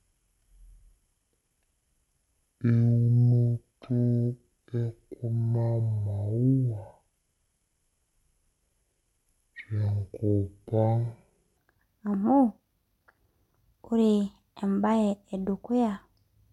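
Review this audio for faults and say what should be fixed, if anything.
From 0.00 to 11.57 s the speech plays as a section at the wrong speed, running at 0.521 times its recorded rate, so it is slowed to roughly half speed and pitched down by about ten semitones, deep and dragged, before returning to normal pace. Because speed and pitch shift together, this is likely a resampling or clock mismatch during editing or playback, where that stretch was read against the wrong sample clock. The section should be re-rendered at the correct rate. To prevent it, confirm that every clip's sample rate matches the session rate before import and export.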